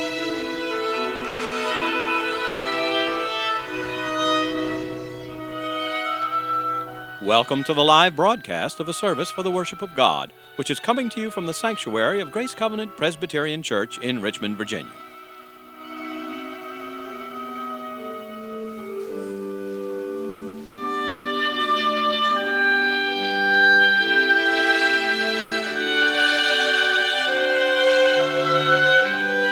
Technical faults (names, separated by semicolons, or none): sample clock jitter; repeated packet loss (robotic sound); long network dropout; burst of packet loss